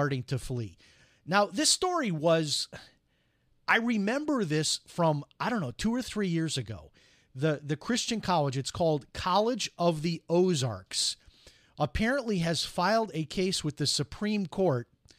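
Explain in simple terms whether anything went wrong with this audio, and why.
Yes, there's a problem running through the whole speech: sample clock jitter. The recorder's timing wobbles by a microsecond or two, so each sample lands slightly off. That adds a faint hiss or grit that rises on loud, bright sounds and disappears in pauses.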